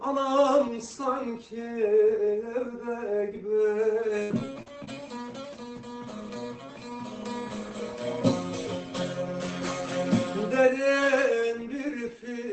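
At 4.23 s a burst of packet loss cuts out about 60 ms of audio. The receiver extends the preceding sound for roughly 64 ms, fading it as a held buzz or hiss, then resumes at 4.32 s with that stretch gone.

Lost packets rebuilt from error correction follow at 4.30, 4.38, 4.55 and 4.66 s, each 20 ms. The decoder plays low-bitrate redundant copies, so there is no gap, only brief rougher, noisier frames.

Short concealed packet loss occurs at 4.63–4.68 s, where 40 ms is missing and 34 ms is filled, and at 4.85–4.89 s, where 20 ms is lost. Extrapolated audio blends back in as a quick smear or wobble.

All of this rides on an Opus call path limited to 8 kHz bandwidth, which fits a modest bitrate.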